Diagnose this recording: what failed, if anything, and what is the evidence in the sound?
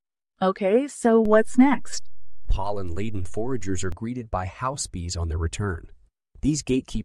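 A DC step at the converter or analogue input stage. At 1.25 s a low thump marks the waveform's zero line jumping to an offset of about -24 dBFS. It holds until 3.92 s, where a second thump marks the return to zero. The speech carries on unchanged across both edges, which separates this from a dropout or packet-loss click: nothing is missing. A held offset is inaudible in itself, so between the thumps nothing rumbles or hums.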